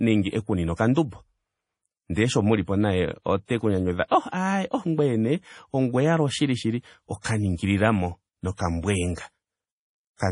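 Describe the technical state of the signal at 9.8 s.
At 9.8 s the speech has no content above 10.5 kHz and a watery, swirling texture, as it does throughout; the cause is likely heavy MP3 compression at a low bitrate, around 32 kbps.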